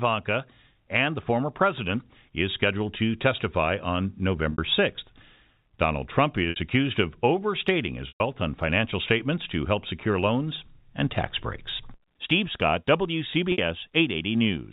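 A short buzzy hold interrupts the speech at 4.52, 6.50 and 13.52 s, each 60 ms. A longer 120 ms gap at 8.08 s fades toward silence. This is packet loss with pitch repetition: the receiver filled missing audio by looping the last pitch period.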